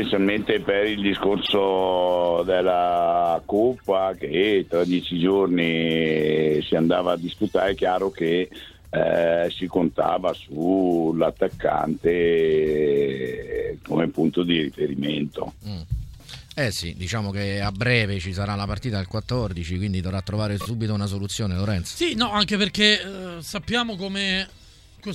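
At 1.45 s, a 52 ms block of sound plays twice, and at 20.60 s a 26 ms block plays three times. These are repeated frames: compressed data decoded more than once, heard as a brief stutter.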